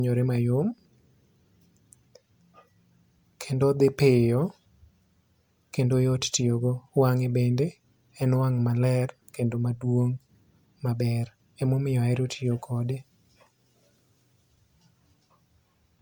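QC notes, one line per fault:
Throughout: generation loss. The speech sounds swirly, smeared and hollow, with blurred attacks, more than a single encode would explain. It likely went through MP3 about four times, each pass requantising on a shifted frame grid. The damage fits 128 kbit/s, with nothing above 20.1 kHz.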